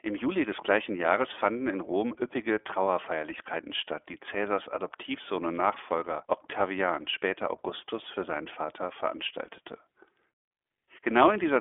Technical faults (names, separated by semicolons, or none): iLBC codec